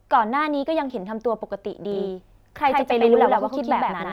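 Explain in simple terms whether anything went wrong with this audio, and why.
From 1.92 s to the end, the speech has a doubled audio track. An equally loud copy trails about a tenth of a second behind, likely from a second, slower recording path.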